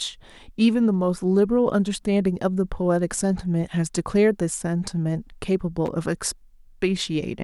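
A short, ragged burst of crackle and scratching breaks into the speech from 5.86 to 5.88 s, lasting only about two hundredths of a second. This is loose connector crackle: a worn or dirty contact somewhere in the signal path briefly lost and regained contact as it shifted, chopping the audio on and off in rapid, irregular fragments. Those sudden breaks produce the harsh, gritty texture heard at that moment.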